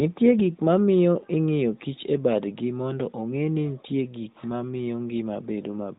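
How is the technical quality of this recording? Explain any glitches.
Nothing stood out on listening: the speech comes through the AMR narrowband mobile codec at 12.2 kbps, with no glitches to report.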